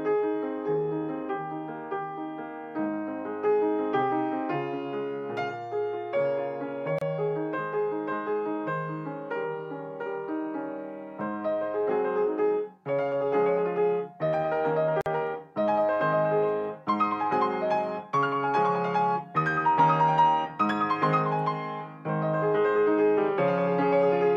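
At 6.99 s and again at 15.01 s, the sound drops out for about 30 ms and then 49 ms, then resumes exactly where it left off. These are gaps at a join of encoded pieces: the audio was encoded in separate segments and concatenated without trimming, so each join keeps the encoder's start-up delay and last-frame padding as silence. The edges of each dropout are softened by codec smearing.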